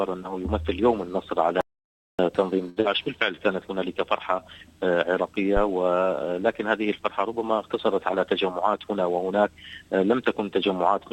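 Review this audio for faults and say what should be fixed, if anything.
At 1.61 s the audio drops out to silence and only comes back at 2.19 s, so about 580 ms is simply gone. The gap is plain silence with no room tone underneath, which tells you the input itself vanished while the recorder kept writing. The likely culprit is a loose connection, a flaky link or an accidental mute. Secure the cabling and the link, and lock or monitor the mute so the input can't go away mid-take.

Just after that, from 2.69 to 2.78 s, there's a short stall from a late packet. The receiver ran out of buffered audio and held the last bit of sound for 68 ms until the packet turned up, then carried on from the same spot. Nothing is lost, but the sound hangs a beat too long and the delay grows by 68 ms. A slightly deeper or adaptive jitter buffer on that link would ride out late packets like this one.

Right on its heels, from 2.80 to 2.87 s, comes a short concealed packet loss. 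About 60 ms never reached the decoder, and the receiver papered over it with 43 ms of continued sound before blending back into the real audio. You hear it as a quick smear, and the delay shrinks a little as it recovers. Improving the network path, or adding forward error correction or redundancy, would cut these losses.

At 5.57 to 5.63 s there's a phantom power thump, a low thud from a supply being switched on a live input. The voltage step punches through the coupling capacitors and dies away fast, with a decay of about 14 ms. Mute the channel or pull the fader down before switching phantom power, and only switch it once the mic is connected.

Finally, from 8.49 to 8.92 s, you get a jitter buffer speed-up. The buffer had built up more audio than it wanted, so the receiver trimmed out tiny pitch-period chunks over and over. That runs the sound at 110% speed with no change in pitch, and it comes across as hurried. 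About a twentieth of a second gets dropped in total. Smoother delivery on the network, or gentler buffer adaptation, would keep it from needing to catch up like that.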